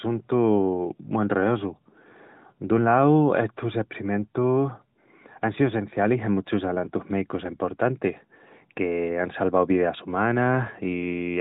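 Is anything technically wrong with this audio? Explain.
No, there is nothing technically wrong with this audio.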